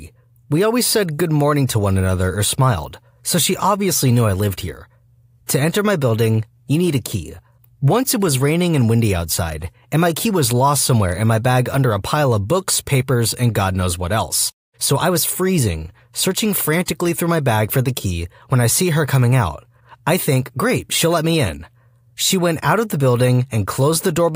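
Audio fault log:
No technical faults can be heard anywhere in the speech recording; level, timing and frequency balance hold steady throughout.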